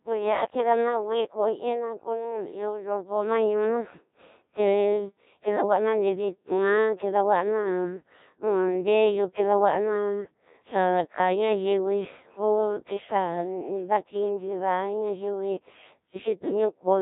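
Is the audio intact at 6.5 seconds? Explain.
No, at 6.5 seconds the speech sounds robotic and buzzy throughout, the mark of the Codec 2 vocoder, resynthesising sine waves from pitch, voicing, energy and envelope, consistent with about 1.3 kbit/s.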